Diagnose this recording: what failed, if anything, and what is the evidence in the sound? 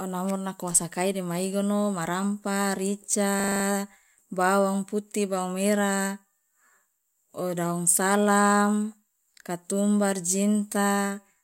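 A system hang loop occurs at the driver/buffer stage from 3.4 to 3.64 s: one 40 ms slice of speech repeats six times, producing a 25 Hz buzzing stutter. The driver stalled while the hardware kept replaying its ring buffer, and speech resumes with essentially nothing missing.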